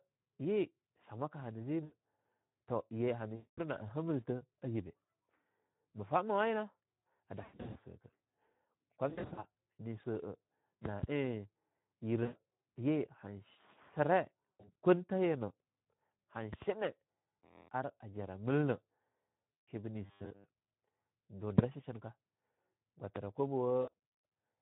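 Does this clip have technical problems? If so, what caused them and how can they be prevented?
Yes. The whole clip has a hoarse, grainy quality with a hissy, artificial top end. These are Speex codec artefacts. Speex is a CELP speech coder, and at a low setting, consistent with about 11 kbps, it has too few bits to describe the excitation signal properly. The result is roughened, noisy speech, and the upper band above 4 kHz is only a synthetic noise fill. Prevent it by running Speex at a higher quality setting or switching to a modern codec such as Opus.

At eight points the speech smears into a buzzy tone or a coloured hiss that fades, then returns weakened for a moment: 1.83 to 1.93 s, 3.35 to 3.60 s, 7.43 to 7.77 s, 9.09 to 9.44 s, 12.23 to 12.39 s, 14.56 to 14.73 s, 19.55 to 19.69 s and 23.81 to 23.93 s. This is VoIP packet loss concealed by the speech codec. When packets went missing, the decoder extended its last pitch and filter with falling gain. 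Some gaps, like those near 7.4, 9.1, 14.6 and 23.8 s, sound like several short dropouts scattered close together. The longest unbroken stretches within them are 60 to 100 ms. Prevent it with a stronger network path, a jitter buffer, and forward error correction or redundancy.

From 20.06 to 20.44 s the sound turns into a rigid, metallic buzz near 100 Hz that still roughly tracks the speech. This is robotic sound from repeated short buffers. For most of that stretch a tiny slice of audio was replayed instead of fresh signal. The 100 Hz pitch fits a repeated block of about 10 ms, likely from audio arriving too late for the playback device. Prevent it with larger buffers and by giving the audio thread higher scheduling priority.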